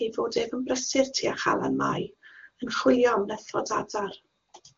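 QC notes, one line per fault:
Nothing stood out on listening to this speech clip carried over the AMR wideband (HD Voice) path.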